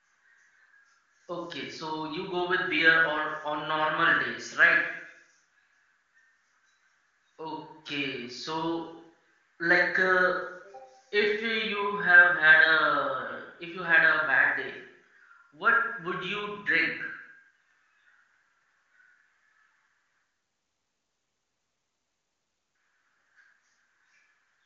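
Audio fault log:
No fault to log in this audio.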